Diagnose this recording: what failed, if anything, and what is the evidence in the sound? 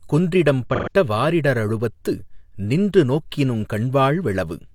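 The codec stage failed with AAC frame loss with concealment. The decoder lost about 128 ms of data, which fits three AAC frames, and patched the gap from the last good spectrum. From 0.74 to 0.92 s the speech turns smeared and phasey, just before "வாரிட ரழுவத்து நின்று நோக்கினுங்".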